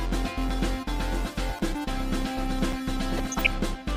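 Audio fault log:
1.59 s, block of digital silence: a hole of about 6 ms where the sound drops straight to silence and returns with no fade, so it is heard as a short tick. The abrupt steps at both edges form the click, which suggests the output buffer was not filled in time.
3.10–3.47 s, DAB burbling: short blips of noise in single sub-bands over the programme. Residual bit errors, at a rate of a few tenths of a percent, slipped past error correction and corrupted the audio data, across a span that fits roughly sixteen MP2 frames.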